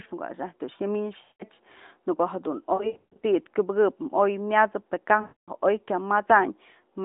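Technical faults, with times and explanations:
1.22–1.43 s, lost AMR speech frames: about 180 ms of speech is lost, which fits a run of nine 20 ms frames. The decoder repeats its last good pitch and vocal tract settings with falling gain. The sound drags out and fades.
2.74–3.25 s, lost AMR speech frames: losses are scattered over about 480 ms, with the longest run 140 ms. The result is a string of dips and warbles.
5.22–5.50 s, lost AMR speech frames: about 260 ms drops out. The sound smears and fades toward silence, then returns weak.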